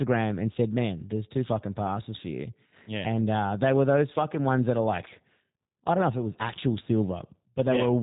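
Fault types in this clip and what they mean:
G.729 codec, throughout: the speech has been rebuilt by a low-rate voice coder rather than carried as a waveform. A vocal tract filter, a pitch predictor and a few pulses per short frame reconstruct it, which leaves a plainly audible rough, synthetic texture across the whole clip. Nothing above about 3.8 kHz survives, so the top end sounds boxed in. The character fits the 8 kbit/s G.729A variant.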